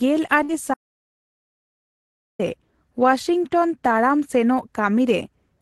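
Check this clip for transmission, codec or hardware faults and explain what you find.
Two faults affect this speech clip, both early on.

From 0.43 to 0.52 s, a burst of packet loss: consecutive packets never arrived, so the receiver stretched the last sound for about 53 ms as a fading buzz or hiss, then skipped 60 ms ahead.

From 0.74 to 2.39 s, an audio dropout to silence, likely from a lost input connection. Silence was recorded instead, so speech cuts off abruptly into 1.65 s of dead silence with no room tone.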